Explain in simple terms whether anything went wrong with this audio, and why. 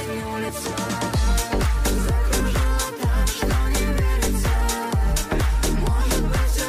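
Two quick jumps interrupt the audio, at 0.49 s and 2.4 s. At each, the sound jumps ahead slightly, skipping about a fiftieth and a hundredth of a second. The likely cause is a dropped buffer (overrun): recorded samples were overwritten before being saved.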